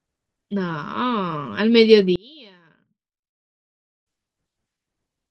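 A speech recording. From 2.16 to 4.06 s the voice almost disappears, dropping by about 30 dB. What remains sounds faint. The likely cause is one channel inverted. Its reversed polarity cancels the centred voice when both channels are summed to mono.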